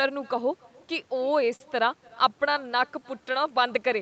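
Right from the start there's an echo with no canceller: the far end is clearly playing the call on a speaker and feeding it back uncancelled. Every phrase gets shadowed about a third of a second later by a faint, thin copy, about 28 dB down. It's quiet, and the speech itself is band-limited to 8 kHz.

Between 1.15 and 1.62 s you get repeated stalls, a stutter. Packets were arriving late, so the jitter buffer kept running dry, four times here, and the receiver stretched the last bit of sound to cover each gap, the longest being 44 ms. Nothing's actually lost, but it drags and hiccups, with about 60 ms of filler in that stretch.

From 2.77 to 3.33 s there's a jitter buffer slow-down. The buffer was building up a reserve by repeating single pitch periods and bits of pause, adding 45 ms. The speech plays at 94% speed with the pitch unchanged, so sounds come out drawn out.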